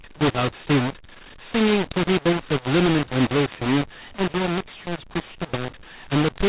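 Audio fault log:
Throughout: mu-law and A-law mixed up. The speech was coded with the A-law form of G.711 but decoded as mu-law. Each 8-bit code is mapped onto the wrong logarithmic curve. Some levels come out too loud and others too soft, so the speech sounds harsh and gritty. The quietest codes are lifted well above silence, so the pauses fill with noise. The telephone band still stops at 4 kHz.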